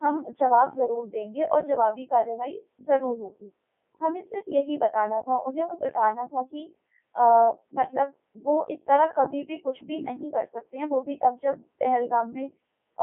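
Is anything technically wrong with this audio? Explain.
Yes. Throughout, the speech has passed through a Codec 2 vocoder, which sends only pitch, voicing, energy and a spectral envelope, then rebuilds the voice from sine waves. The damage is heavy: robotic, buzzy speech confined to about 250 Hz to 3.4 kHz, with nothing above 3.8 kHz, which fits Codec 2's top 3.2 kbit/s mode.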